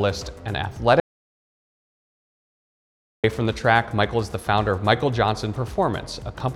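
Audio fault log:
1.00–3.24 s, audio dropout to silence: the sound stops dead at 1.00 s and comes back abruptly at 3.24 s, leaving about 2.24 s of pure silence with no room tone or background hiss at all. That total silence is why it reads as the input vanishing rather than things going quiet. The likely cause is a dropped input, whether a disconnected device, a failed link or an accidental mute, while recording kept writing silence. Whatever sounded in that stretch is simply gone.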